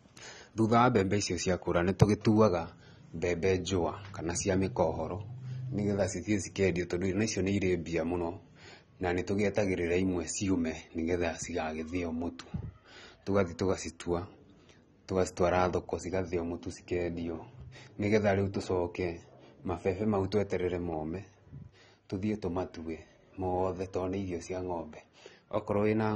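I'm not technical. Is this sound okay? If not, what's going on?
No. From start to finish the speech sounds dull and smeared, with a warbling, fizzy edge on hissy sounds. That points to AAC compression, likely at a low setting. Nothing above about 12.5 kHz survives, but unlike simple muffling, it also adds that watery shimmer.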